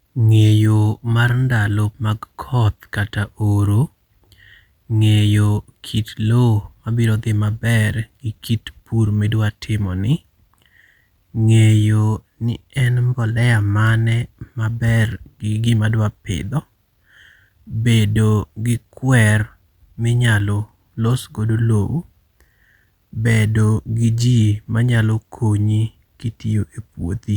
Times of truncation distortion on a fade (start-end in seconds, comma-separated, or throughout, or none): none